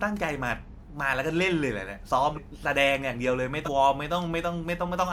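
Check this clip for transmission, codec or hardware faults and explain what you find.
The speech has two places where a short stretch of audio goes missing. At 2.35 to 2.39 s and again at 3.65 to 3.69 s, the sound jumps forward abruptly. Both are compressed frames skipped: about three whole 46.4 ms frames, roughly 150 ms of audio, were never played, either lost from the stream or rejected by the decoder as damaged.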